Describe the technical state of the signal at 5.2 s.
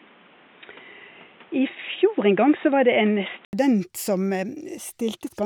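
At 5.2 s the speech signal is intact, with no audible fault at that point.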